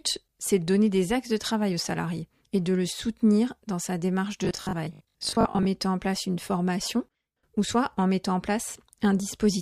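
From 4.45 to 5.69 s the speech takes on robotic sound from repeated short buffers: a rigid, metallic buzz at a fixed 50 Hz that still loosely tracks the syllables. The likely cause is audio arriving too late, so the player loops the last 20 ms of sound, repeating roughly two fifths of the stretch while real audio is skipped. Unlike a clean dropout, there is no silence, and unlike a pitch shift, the buzz stays locked at one pitch.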